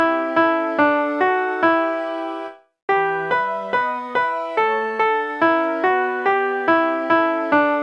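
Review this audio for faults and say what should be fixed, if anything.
Wrong sample rate, throughout the clip: everything runs 1.5 times too fast and sits about 7 semitones (roughly a fifth) too high, with speed and pitch shifted together. That ratio fits audio captured at 16 kHz being played back at 24 kHz with no rate conversion. To prevent it, carry the true sample rate through to playback, or resample to the output device's rate before playing.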